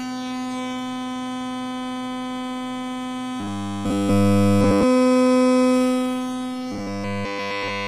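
Everyday sounds in which incoming audio likely stalled, so a 10 ms buffer loops at 3.40–4.83 s and 6.72–7.88 s. The result is robotic sound from repeated short buffers: a rigid 100 Hz buzz.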